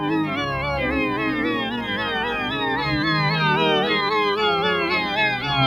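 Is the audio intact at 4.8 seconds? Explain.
No, a noise suppressor applied to music or sounds runs throughout, treating sustained tones and tails as noise, so at 4.8 s the sound pumps and thins by about 5 dB.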